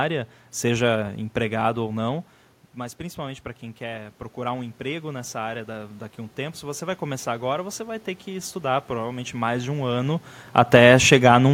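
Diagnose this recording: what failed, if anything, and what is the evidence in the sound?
The failure is automatic gain rising in the call processing. After the talker backs off the mic around 2 s and the input drops about 13 dB, the AGC slowly pulls gain up about 9 dB from 2.76 to 9.76 s, swelling speech and room noise together.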